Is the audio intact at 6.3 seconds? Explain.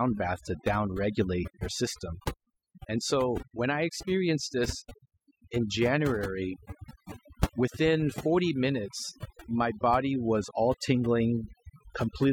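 No. Overdone noise removal runs through the whole clip, so at 6.3 seconds the speech is still being processed too hard. A noise reducer set far too strongly pushes individual frequency bands down or silences them whenever their level sits close to its noise estimate. Softer parts of the voice get removed along with the noise. The background drops and breaks up into twinkling, warbling specks.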